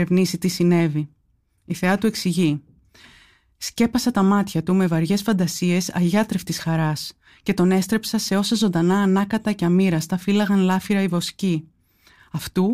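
No technical faults are audible.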